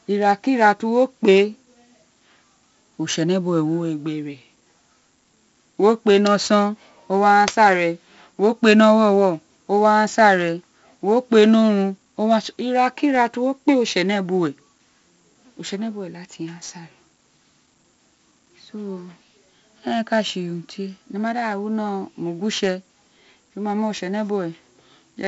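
From start to end, the speech carries 4-bit ADPCM compression damage. Each sample is coded as a coarse step from a prediction, so a gritty hiss rides on every loud syllable and sharp onsets distort. On a spectrogram, broadband noise rises with the speech; the rate points to about 64 kbps.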